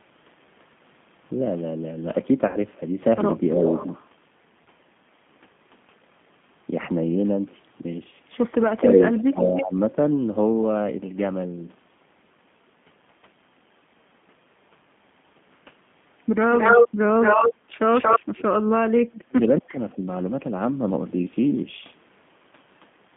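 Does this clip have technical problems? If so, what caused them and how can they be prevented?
Yes. The whole recording sounds slightly rough and synthetic, with nothing above 3.5 kHz or below 150 Hz. This is the G.729 codec at 8 kbit/s, which rebuilds speech from a coarse filter-and-pulse model. Prevent it with a wideband codec such as G.722 or Opus.

At 2.47–2.57 s and 4.64–4.68 s the speech smears into a brief buzzy tone or coloured noise that fades. This is VoIP packet loss concealed by the speech codec: the decoder stretched its last pitch and filter across about 70 ms and 20 ms of missing audio. Prevent it with a stable network, QoS marking and a properly sized jitter buffer.

From 9.13 to 9.63 s a faint delayed copy of the speech trails the original by about 0.3 s, around 10 dB quieter. This is likely an echo leak, where a loudspeaker's sound got past the far end's echo canceller. 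Prevent it with a headset or better acoustic echo cancellation at that end.

At 17.55–17.71 s the room background dips by about 9 dB for roughly 150 ms. This is background gated by the echo canceller, which turned the microphone down while the loudspeaker played. Prevent it with gentler suppression settings or comfort-noise insertion.

From 18.2 to 20.04 s the speech dips, loses its high end or cuts out in pieces, by as much as about 35 dB over roughly 1.5 s. This is speech suppressed in double talk, likely because both sides spoke at once and the canceller turned both down. Prevent it with an echo canceller that handles double talk well, or with headsets on both sides.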